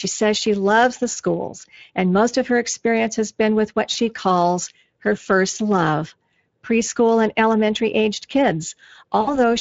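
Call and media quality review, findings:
Speex codec, full clip. Plainly audible coding damage. Speech sounds noisy and hoarse throughout. CELP excitation is short on bits, so the fine structure becomes rough. The artefact level points to a mid-range Speex setting, around 20 kbps.

VoIP packet loss concealed by the speech codec, 3.93–3.96 s and 9.21–9.39 s. Sound smears into a buzzy tone or coloured noise that fades. The decoder extrapolates from its last pitch and filter. About 20 ms is lost, then about 60 ms. The second gap leaves a weak, distorted tail.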